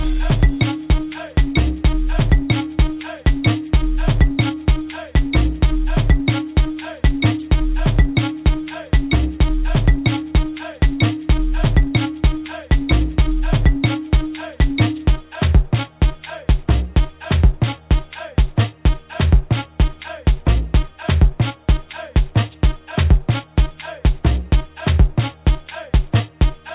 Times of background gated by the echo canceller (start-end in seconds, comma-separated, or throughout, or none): none